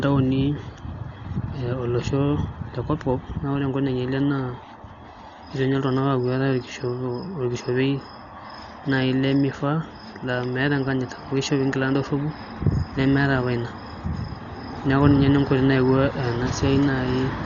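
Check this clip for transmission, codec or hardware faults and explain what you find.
There is one fault, and it runs through the whole speech clip: heavy codec damage, most likely from Dolby Digital compression at a low bitrate. Nothing is present above 7 kHz, so the speech sounds dull and muffled. The sound suggests a rate around 40 kbps. At that rate the AC-3 encoder narrows the band and leaves many frequency lines without mantissa bits, and the decoder fills them with dither noise. That noise gives a rough, fluttering grain around voiced tones. A simple low-pass filter would sound dull but clean, and MP3-style damage tends toward swirly, watery artefacts rather than this noisy roughness.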